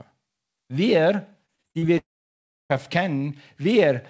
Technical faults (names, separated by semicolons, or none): repeated packet loss (robotic sound); long network dropout